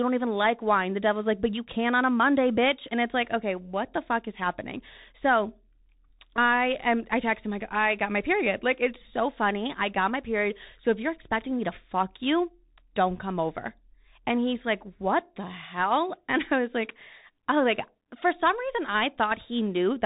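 Throughout, a Bluetooth CVSD headset codec, consistent with a 64 kbps one-bit delta link, removes everything above 3.8 kHz, leaving scratchy s sounds over granular hiss.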